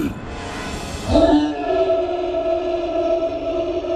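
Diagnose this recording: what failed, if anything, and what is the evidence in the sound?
The codec stage failed. For the whole recording the sound is dull, with a gurgling, granular grit riding on it. The top end is not simply rolled off. It flickers, as if upper bands drop in and out. The likely cause is MP2 compression at a starved bitrate, around 80 kbps. Layer II splits the signal into sub-bands and shares out bits. Short of bits, it mutes the upper bands and coarsely quantises the rest.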